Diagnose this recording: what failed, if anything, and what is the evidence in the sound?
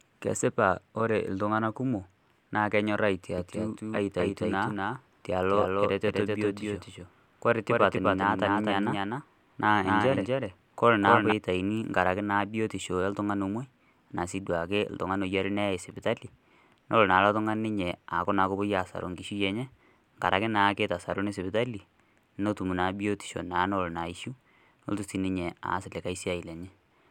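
The speech was most likely captured twice or left as two misaligned copies in an edit, causing a doubled audio track from 3.38 to 11.32 s, just after "ltung'ana kumok naa kenyorr". A full-band copy trails about a third of a second behind, a few decibels quieter, with no room colour, and it starts and stops abruptly.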